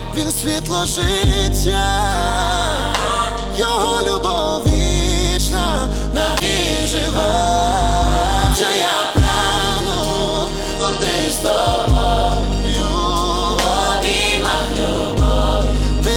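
From the very start there's overlap-add ripple running under everything. Somewhere along the way the audio was chopped into windowed frames and stitched back together with an overlap that doesn't add up to a flat gain, so the level swings by about 11 dB once per frame, at somewhere around 200 Hz. That's fast enough to come across as a metallic buzz with extra tones around each note riding on the whole clip rather than a slow wobble.

On top of that, there are four short hits of damaged data in the compressed stream: 6.38 to 6.43 s, 8.51 to 8.57 s, 10.77 to 10.83 s, and 14.49 to 14.54 s. Each lasts roughly 50 to 60 ms. In those spots some of the encoded bytes were corrupted, so the decoder misreads the frames, loses its place and has to hunt for the next valid header. You hear each one as a brief chirpy squawk or blip cutting through the sound.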